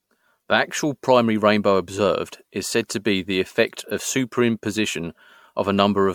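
Across the whole speech clip there is generation loss, likely from the audio passing through an MP3 encoder around seven times at rates near 110 kbit/s. Each re-encode requantises on a shifted frame grid, so artefacts stack: the sound is swirly and hollow, with smeared consonant attacks and a watery texture beyond what a single pass at that rate would give. The band is empty above about 19.9 kHz.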